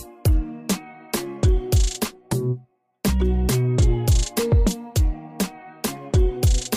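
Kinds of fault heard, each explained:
Nothing here stands out as a fault; the sound carries on steadily with no glitches, dropouts or distortion to point to.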